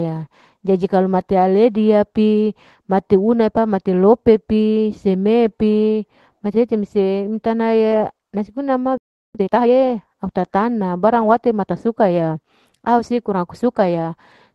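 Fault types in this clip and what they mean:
Clock drift between sender and receiver: The sender's clock runs roughly 2% slower than the receiver's, so the jitter buffer keeps draining. The receiver makes up the shortfall with small edits, which show in the waveform as tiny, unevenly spaced seams rather than one obvious break.
Repeated timing corrections: From 0.18 s to the end at 14.55 s, the receiver keeps cutting or repeating short pieces. The speech plays at about 98% of its pace. On a spectrogram this shows as faint, irregular smears or doubled slivers at splice points.
Playback stall: From 8.98 s to 9.35 s, about 0.37 s, the output goes completely silent in mid-flow. The likely cause is the buffer running empty or the player thread blocking. The waveform shows a flat gap, and the spectrogram shows a blank vertical band.
Time-compressed catch-up: From 9.35 s to 9.71 s, the player clears its backlog by cutting and cross-fading small pieces. 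For that stretch the speech runs at 2x speed but keeps its normal pitch. Formant patterns on the spectrogram look squeezed horizontally, without shifting in frequency.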